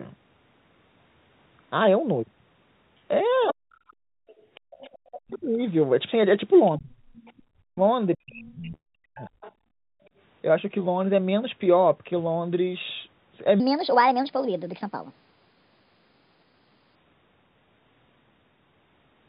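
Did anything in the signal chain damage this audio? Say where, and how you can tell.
Yes, several stages left marks, mostly in the call processing.

Other side's voice leaking through shows up at 3.48 to 5.38 s, 6.66 to 7.42 s and 8.33 to 10.09 s, as a faint second voice about 25 to 30 dB under the talker. The likely cause is the echo canceller leaving some loudspeaker playback in the mic feed.

Speech suppressed in double talk hits at 3.5 to 3.72 s, 5.06 to 5.6 s and across 6.78 to 9.29 s, where the talker dips by roughly 40 dB. This is likely the canceller ducking everything while both sides overlap, because it can't tell its own talker from the echo.

You can also hear the background gated by the echo canceller at 4.0 to 4.71 s (about 33 dB down) and 9.56 to 10.12 s (about 36 dB down). The room tone drops out while the far end plays and returns once the canceller releases the mic.

A burst of packet loss at the network stage sits at 8.74 to 8.88 s. 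About 120 ms of audio is missing. Concealment stretches the last sound for about 115 ms and fades it out, leaving roughly 70 ms of silence before the audio picks up further on.

There is a section at the wrong speed from 13.6 to 16.95 s. It runs 1.34 times fast, so the pitch rises about five semitones and everything sounds rushed. That points most likely to a storage or playback step using the wrong clock.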